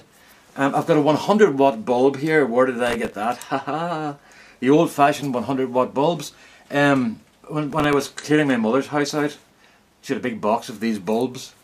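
Processor overload crackle, from 2.87 to 3.24 s and again from 7.71 to 8.29 s: the processor repeatedly misses its deadlines for very short buffers, under a millisecond, replaying stale audio with hard edges each time, so a gritty tearing rides over the sound until the load eases.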